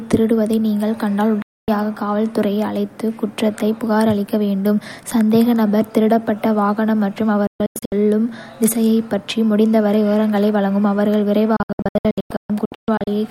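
At 1.42 s the speech cuts to silence with a fade of only about 3 ms, returning at 1.68 s. This is a digital broadcast dropout: the receiver muted when frames went missing or failed their checks, and the programme content from that span is simply gone. From 7.47 s to 7.92 s the audio breaks into several short holes, none longer than 128 ms, which fits 32 ms frames lost in small clusters. From 11.56 s to 13.11 s the same stuttering pattern returns over a longer stretch, with about 0.86 s missing in total.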